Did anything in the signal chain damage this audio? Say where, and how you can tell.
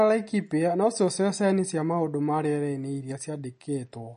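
Yes, at the codec stage: the speech has a hard ceiling near 10.6 kHz and a watery, swirling texture throughout, which points to likely MP3 compression at a low bitrate, around 40 kbps, where the encoder cuts the treble and switches weak frequency lines on and off.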